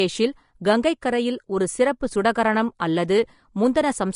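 Throughout the speech, the treble has been quantised too coarsely for the bits available, which points to a low-bitrate lossy encode, likely Vorbis at around 36 kbps. The encoder has removed everything above 10.6 kHz and turned much of the remaining high-frequency detail into noise of similar energy. The damage is plainly audible. The speech comes across hissy and grainy, the tonal parts of the voice sound roughened, and consonant onsets lose their crispness.

At 1.01 s, the codec's quantisation noise has spread backwards over a sharp onset. A transform codec spreads its error across the whole block, so noise scaled for the loud attack also spills into the quiet stretch just before it. This is pre-echo, spanning about 10 ms. It is heard as a brief hiss just before the attack, which makes the onset sound softened and smeared.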